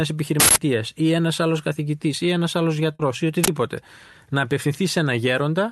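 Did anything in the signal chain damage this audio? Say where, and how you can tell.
Yes. Two uninitialised buffer events occur at the driver or buffer stage: a 160 ms burst from 0.40 to 0.56 s, just before "ή ένα άλλο καθηγητή", and a 40 ms one at 3.44 to 3.48 s. Leftover memory played as samples gives loud, harsh digital noise. A simple click would be far shorter and lack that noisy texture.

A short concealed packet loss occurs at the network stage from 2.95 to 3.02 s, right after "καθηγητή ή ένα άλλο". About 40 ms of audio arrived too late, and the Opus decoder continued the preceding sound to fill the gap. The result is a brief smear rather than a noise burst or a drop to silence.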